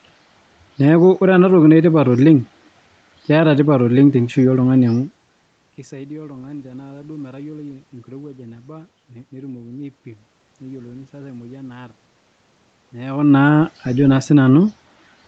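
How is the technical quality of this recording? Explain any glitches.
Nothing in this recording stood out as a glitch on listening.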